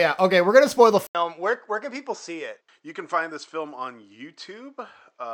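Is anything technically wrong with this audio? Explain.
Yes. From 1.07 s to the end, the audio shows an input switched to a poorer device. A gap of 80 ms of silence marks the switch. After it, nothing is heard above 8.2 kHz, so the speech turns duller and boxier. The level also falls by about 5 dB, and a faint new noise floor appears well below the speech. This most likely comes from the system changing to another, narrower-band microphone or a headset's call profile mid-recording.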